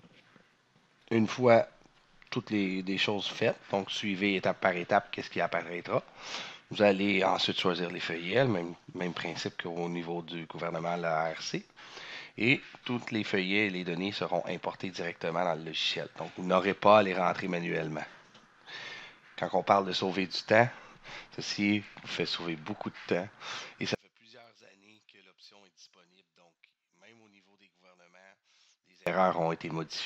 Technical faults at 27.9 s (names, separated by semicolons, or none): one channel inverted